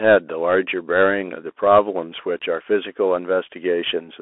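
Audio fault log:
Throughout, Bluetooth CVSD headset codec: the speech is confined to a telephone band of roughly 300 Hz to 3.4 kHz, with nothing above 3.8 kHz, which fits a 64 kbps CVSD headset link. The coder sends one up-or-down bit per sample with an adapting step, so loud high-frequency sounds outrun the step and distort, s sounds come through scratchy, and a granular hiss sits under the speech. The codec damage is plainly audible.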